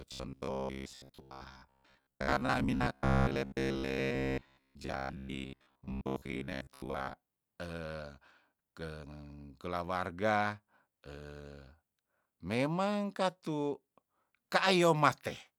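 Robotic sound from repeated short buffers runs from 0.02 to 7.17 s: the speech becomes a rigid, metallic buzz at about 67 Hz, likely because audio arrived too seldom and a 15 ms slice was replayed for most of that stretch while real audio was skipped.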